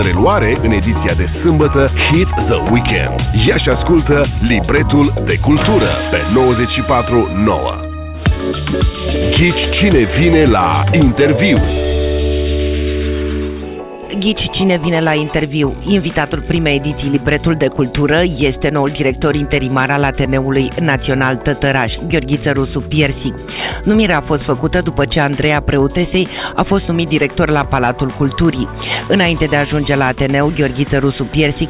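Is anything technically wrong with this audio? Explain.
No technical faults are audible.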